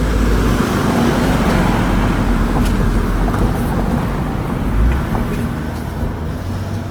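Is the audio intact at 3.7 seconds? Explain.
No, the whole clip carries plainly audible Opus compression damage, likely from a low-bitrate music-mode encode around 24 kbps that fills starved bands with noise, so tones sound rough and grainy.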